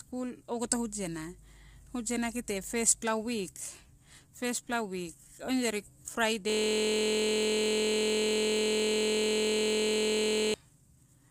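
From the start, the speech is rough and grainy. Noise fills the gaps between the pitch harmonics, and the top band sounds thin and synthetic. This is plainly audible codec damage, likely from low-delay AAC compression of the AAC-ELD kind used in video calls. Its short frames resolve harmonics poorly and spend more bits on side information, so the grain points to a low bitrate near 32 kbps.

At 6.50 s a system hang loop begins and runs to 10.54 s. The computer or driver froze while the sound hardware kept replaying its ring buffer. One 23.22 ms slice of audio repeats exactly, well over a hundred times. That length fits a 1024-sample buffer. Repeating at 43.1 Hz, the slice merges into a steady, low, mechanical buzz in place of the speech.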